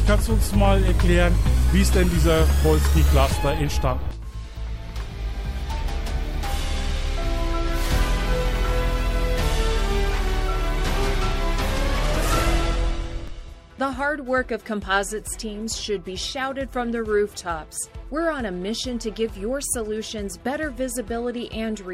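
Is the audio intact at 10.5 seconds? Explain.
Yes, at 10.5 seconds the audio is intact, with no dropout, glitch or other fault at that moment.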